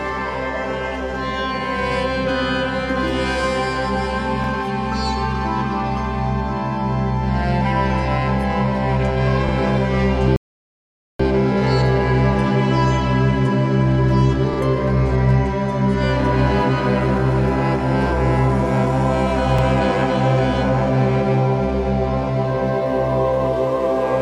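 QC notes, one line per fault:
4.44, 9.49, 14.54 and 19.59 s: overlapping chunks. At each join, every 5.0 s, the new chunk begins 47.9 ms before the previous one ended, so that stretch of sound plays twice. The repeat is heard as a brief stutter or click at a regular interval.
10.36 to 11.20 s: rebuffering stall. Playback ran out of buffered audio and halted, leaving silence until more data arrived. The sound then resumes exactly where it stopped, so nothing is skipped, but the clip runs about 0.83 s longer.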